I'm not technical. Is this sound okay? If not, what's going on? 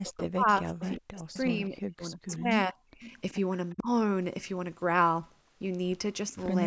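No. During the first three seconds, and again briefly from 3.74 to 3.88 s, the voice dips sharply and drops out in pieces. This is speech suppressed in double talk, likely because both sides talked at once.

You can also hear a faint, delayed copy of the voice, arriving about 0.37 s late, from 0.48 to 1.4 s, around 2.3 s, from 3.02 to 3.33 s, and around 3.7 s. That's echo leak, likely from a loudspeaker's sound getting back into the microphone.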